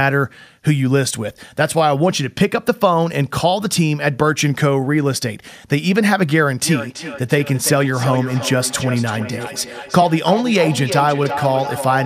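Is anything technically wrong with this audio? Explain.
Yes. From 6.62 s to the end, speech comes back roughly every 300 ms, peaking about 9 dB below the voice. This is feedback echo between two devices, where a nearby device replays this microphone's signal back into it.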